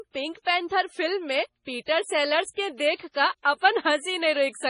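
A speech recording with heavy MP3 compression running through the whole clip. Nothing comes through above about 10.5 kHz, and the quieter detail sounds watery and swirly as it flickers in and out between frames. That fits a low bitrate around 24 kbps, likely where it came from.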